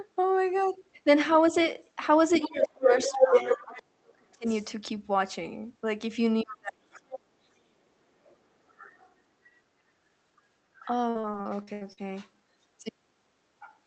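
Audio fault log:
2.33–3.82, 4.45–4.66, 7.12–7.16, 8.68–9.13 s, other side's voice leaking through: A second talker sits under the main speech, about 5 dB louder than it at first and later about 15 to 25 dB quieter. This is likely loudspeaker echo the canceller missed. On the spectrogram, extra harmonic stripes overlap the speech.
2.47–4.44 and 6.42–7.48 s, speech suppressed in double talk: The talker's level collapses by as much as about 35 dB, in pieces across about 1.5 s and then about 1 s. The canceller likely ducked everything at once. The waveform shows deep notches, and the spectrogram shows the upper bands going dark.
11.09–11.99 s, repeated packet loss (robotic sound): Seven holes in quick succession, the longest about 77 ms, are each patched by stretching the previous sound. About a third of this span is concealed. The result is choppy, with pieces missing. The spectrogram shows smeared, flat repeated frames between breaks.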